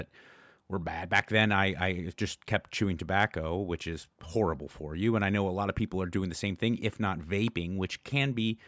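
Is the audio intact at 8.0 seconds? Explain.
Yes, the speech at 8.0 seconds is intact, with no fault at that moment.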